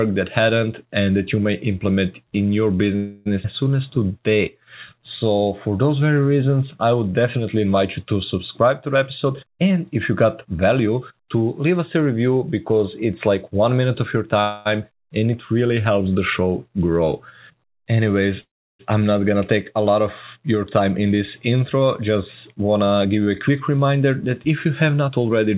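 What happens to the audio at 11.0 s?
A jitter buffer speed-up runs from 8.94 to 11.50 s, just after "you to subscribe to". Repeatedly cutting pitch periods drops about a third of a second, hurrying the sound to 112% at unchanged pitch. On a waveform, syllables look compressed. On a spectrogram, harmonic spacing stays constant.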